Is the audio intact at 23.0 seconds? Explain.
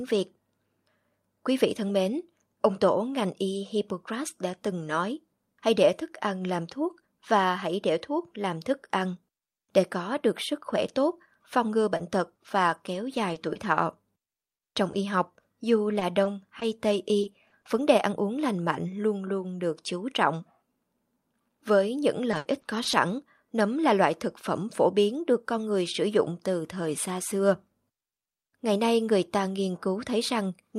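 No. At 23.0 seconds the speech is inside a stretch of repeated packet loss (robotic sound), running from 22.31 to 23.09 s. Audio data kept going missing across this span, five times in all. Each hole was filled by stretching the last received sound forward, the longest patch covering 80 ms. About a fifth of the span is rebuilt this way. The speech turns choppy, with brief pieces dropped out.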